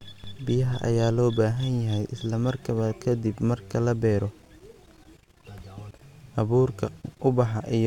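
No technical faults can be heard anywhere in the speech.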